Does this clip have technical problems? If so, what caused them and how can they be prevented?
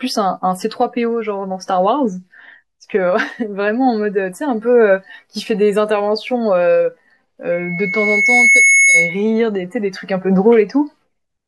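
Yes. From 7.52 to 9.23 s there is loudspeaker feedback squeal. The microphone is picking up its own loudspeaker, and the loop gain exceeds one at 2.2 kHz. That tone swells over about a second until it is slightly louder than the speech. On a spectrogram it shows as a bright horizontal line at 2.2 kHz. To prevent it, lower the loudspeaker gain, move the microphone away from or behind the speaker, or notch out 2.2 kHz.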